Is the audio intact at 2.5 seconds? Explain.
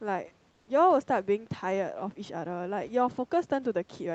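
Yes, at 2.5 seconds the speech comes through intact, with nothing there beyond the ordinary character of the Opus call path and the faint room noise well beneath it.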